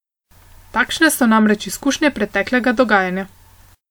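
Throughout the speech, two layers of codec artefacts sit together, heard at once, with nothing above 20.1 kHz. The likely cause is transcoding between lossy codecs, one re-encoding another's artefacts, which fits MP3 followed by WMA, both around 96 kbit/s.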